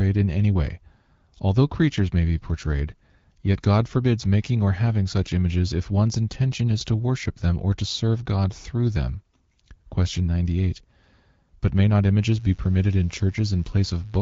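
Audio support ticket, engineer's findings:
Mains buzz, 12.22 s to end, after "may not". Steady raspy 50 Hz buzz, faint, roughly 35 dB below the speech. Dimmer, rectifier or poor shielding injecting switching spikes twice per mains cycle.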